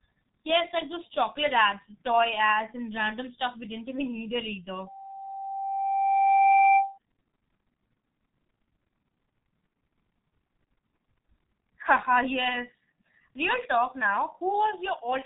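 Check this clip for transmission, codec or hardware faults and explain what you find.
Two faults are present: heavy low-bitrate codec damage throughout and a feedback squeal in the first half. The whole clip passed through the G.723.1 codec at 6.3 kbit/s, with nothing above 3.8 kHz surviving, so the speech is muffled and hoarse and its consonants are smeared. From 4.86 to 6.98 s, just after "even need it either", a loudspeaker feedback squeal appears: the microphone-to-speaker loop runs away at 783 Hz, building over about two seconds into a howl about 10 dB above the speech.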